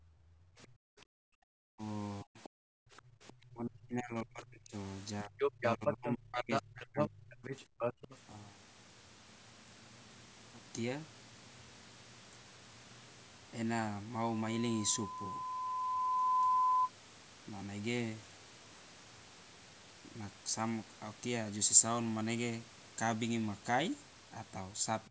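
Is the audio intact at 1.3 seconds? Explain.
No. At 1.3 seconds the speech sits inside a suppressed stretch running from 0.0 to 1.82 s, where the level is pulled down sharply, at its deepest by about 40 dB, so the speech thins and drops out in pieces. This is most likely speech suppressed in double talk: with both ends talking at once, the echo canceller could not tell the near talker from loudspeaker echo and attenuated everything.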